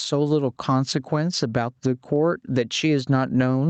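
From start to finish the speech shows gain pumping. The level swings by roughly 10 dB, and the speech itself sounds squashed and flat in dynamics. The likely cause is an input gain set far too high, with a fast limiter clamping it on each peak. A noise gate, by contrast, would cut the pauses to silence.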